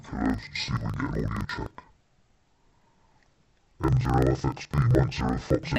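From start to finish, interleaved audio is read as planar. Each 43 ms block, which points to 2048-sample blocks, has its left-right pairs split into halves played at half speed, so the sound drops an octave, doubles, and chops at 23.4 Hz.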